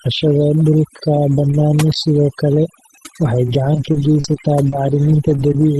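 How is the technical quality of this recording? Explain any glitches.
The speech is heavily over-processed throughout, with brief glitches near the end, all carried over a call path whose sound tops out near 12 kHz.

Overdone noise removal runs the whole clip: the background drops and breaks up into twinkling specks because the suppressor cut bands it mistook for noise, taking quiet speech bands with them.

Scattered short gaps fall between 3.45 and 5.58 s: about four brief ticks and smears, the longest around 40 ms and 80 ms lost in all, where missing packets were patched by stretching the preceding sound.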